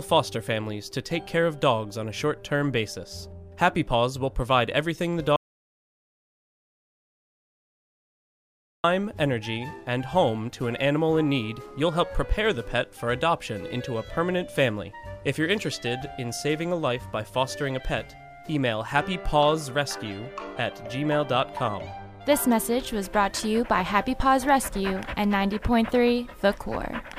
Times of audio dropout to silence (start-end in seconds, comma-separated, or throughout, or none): 5.36-8.84